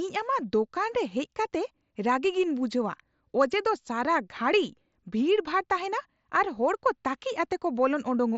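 Nothing technically wrong turns up in this speech clip, which comes through a Bluetooth headset link using the mSBC codec with its usual 8 kHz ceiling.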